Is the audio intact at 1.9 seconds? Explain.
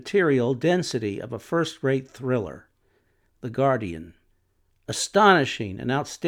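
Yes, at 1.9 seconds the speech plays through intact, with no audible fault at that moment.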